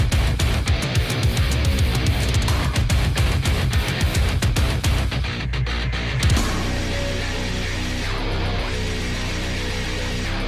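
No technical faults are audible.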